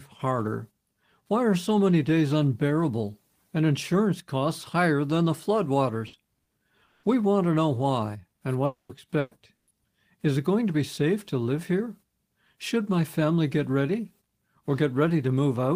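Bursts of packet loss at 6.07 s, 6.43 s, 9.19 s and 9.55 s each replace 60 to 120 ms with a fading continuation of the preceding sound before the audio resumes further on. A long network dropout is the likely cause of the gaps at 6.85 to 7.06 s and 8.65 to 8.92 s, where 180 and 240 ms are lost; the second fades into about 110 ms of silence.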